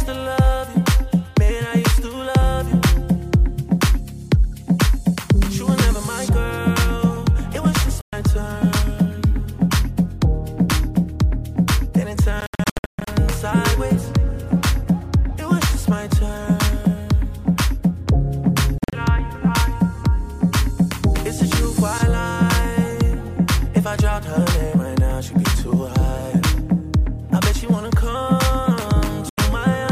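Silent holes at 8.01 s, 12.41 to 13.07 s (broken into several gaps), 18.78 s and 29.29 s, likely Bluetooth dropouts: packets arrived late and were discarded. Unlike a stall, the sound resumes further along, as if it had kept playing.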